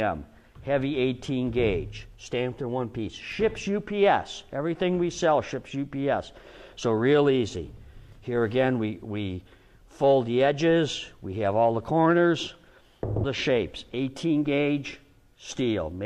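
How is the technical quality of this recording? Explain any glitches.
There's one glitch worth flagging. At 13.19 to 13.24 s you get damaged data in the compressed stream: the decoder hits corrupted frames and loses sync, leaving a brief glitch.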